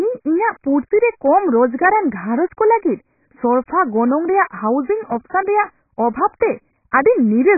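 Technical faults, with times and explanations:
Throughout: AAC compression. The speech has nothing above 2.5 kHz, so it sounds dull and muffled, and sibilants lose their edge. The heavy smearing and warbling texture on sustained sounds are likely caused by low-bitrate AAC-LC coding, consistent with a rate of about 12 kbps. At that rate the encoder lowers its cut-off and coarsely quantises each frame's frequency lines against a hearing model, dropping detail it judges least audible.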